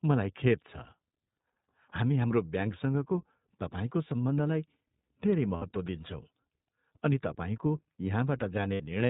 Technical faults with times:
0.00-9.09 iLBC codec
5.56-5.63 lost iLBC frames
8.74-8.82 lost iLBC frames

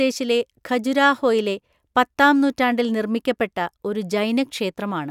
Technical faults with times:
none

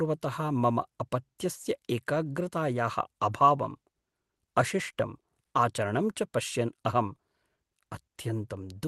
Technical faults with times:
none

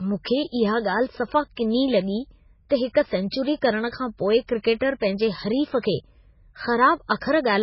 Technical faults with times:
0.00-7.63 MP3 compression
7.18-7.21 pre-echo

